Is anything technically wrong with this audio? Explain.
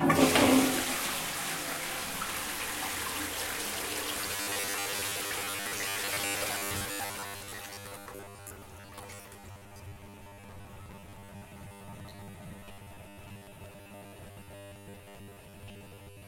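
Yes. From 4.12 s to the end, the audio has a robotic sound from repeated short buffers. A rigid, metallic buzz near 100 Hz is heard. It is likely caused by late audio being patched with roughly 10 ms repeats, replacing most of the real sound.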